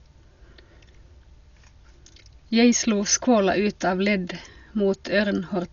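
Throughout the speech the sound is dull and boxed-in, with nothing above about 7.1 kHz and a rough, fluttering noise hanging around voiced tones. This is likely heavy Dolby Digital compression at a low bitrate around 48 kbps, where missing fine detail gets filled with noise.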